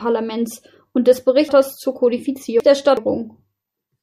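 From 1.49 to 2.97 s, just after "und des", the speech turns jumbled: chunks out of order. A 372 ms chunk plays three chunks late, leaving three hard joins. Unlike a dropout or repeat, nothing is missing or doubled. It is only reordered.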